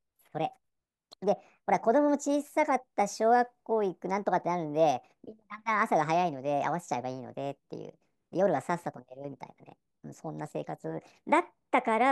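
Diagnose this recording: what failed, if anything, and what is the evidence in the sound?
The voice runs high and hurried for the whole clip, pitched up by about 5.6 semitones and moving 1.38 times faster than natural, with pitch and tempo shifted together rather than independently. That locked pairing is the signature of a wrong sample rate at playback: the samples are clocked out faster than they were captured, with no rate conversion in between. A ratio of 1.38 fits 32 kHz material being played at 44.1 kHz.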